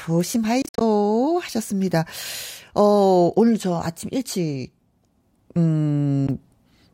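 Audio packets likely reached the headphones too late and were dropped, a Bluetooth dropout. Between 0.62 and 0.81 s the speech breaks into short silent gaps totalling 133 ms, the longest 53 ms. At 6.27 s a single 13 ms gap follows, and the sound resumes as if it had played on.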